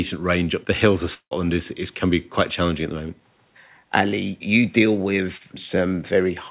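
Long network dropout, 1.14 to 1.33 s: right after "up the hills of", the speech breaks off for about 0.2 s. The gap is likely a stretch where no packets arrived. The receiver carries the last sound forward as a fading buzz for roughly 0.17 s, then leaves a brief near-silence before the talker returns at "is is can be". About 0.18 s of real speech is simply gone, so the phrase jumps across the hole instead of resuming where it stopped.

Short concealed packet loss, 5.37 to 5.42 s: just after "you deal", about 40 ms of audio failed to reach the decoder in time. The receiver patched the gap by extending the preceding sound, following its pitch where it was voiced and using shaped noise where it was not, then blended back into the real signal. What you hear is a quick smear or wobble lasting a few hundredths of a second.

Repeated buffer, 5.69 s: here the playback device ran short of fresh audio and played its last block a second time. 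The repeated piece is only about 5 ms long, which fits a buffer of that size, so instead of an audible stutter it comes across as a single small click or tick caused by the hard joins. Almost nothing is lost, and the speech carries on straight away, still band-limited to 4 kHz by the G.711 call path.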